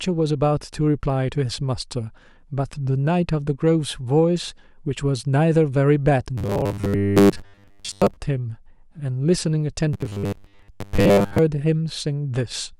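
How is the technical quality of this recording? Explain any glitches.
Two stretches of the speech turn robotic. The first runs from 6.38 to 8.17 s, the second from 9.93 to 11.39 s. Both show robotic sound from repeated short buffers. A short slice of audio is likely being replayed because fresh data arrives too slowly, and most of the real signal is skipped. The repeats recur every 10 ms, imposing a fixed 100 Hz buzz. The voice becomes a stiff metallic buzz that only loosely tracks the words.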